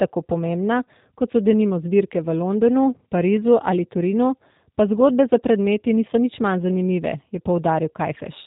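From start to finish the speech sounds slightly rough and synthetic, with a muffled top end and plainly audible coding damage, the signature of the G.729 codec. Everything above 4 kHz is gone because the codec works on narrowband audio. Each 10 ms frame is rebuilt from a vocal tract filter, a pitch predictor and a handful of pulses rather than the original waveform, which fits an 8 kbit/s voice link.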